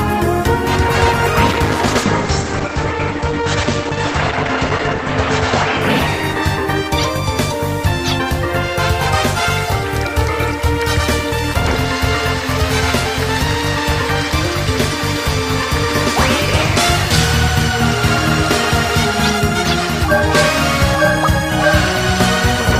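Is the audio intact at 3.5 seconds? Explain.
No. At 3.5 seconds the audio sits inside a call bitrate drop running from 1.46 to 6.95 s. The encoder coarsens its coding, and the top end is cut from 20 kHz to 8 kHz. That sounds rough and muffled, fitting a fall to around 10 kbps.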